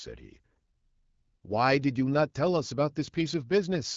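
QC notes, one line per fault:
No faults to note in the speech, so there is no line per fault to give.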